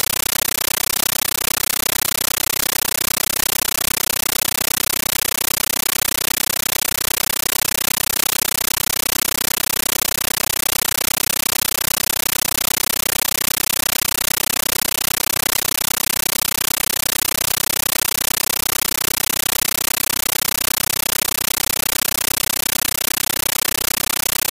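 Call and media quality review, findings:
Compressed stream played as audio, throughout: loud chattering static in 13.3 ms bursts, 31.25 per second, silent gaps between, unlike steady hiss. Digital output passing undecoded AC-3.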